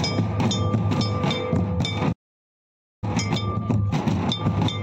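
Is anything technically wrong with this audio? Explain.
Yes. From 2.12 to 3.04 s there is a playback stall: the sound stops dead for about 0.9 s, most likely because the player ran out of buffered data or its thread was blocked. From 3.04 to 4.72 s comes time-compressed catch-up: the player clears its backlog by removing short slices and cross-fading the joins, so the sound runs at 1.5 times normal speed without a change in pitch.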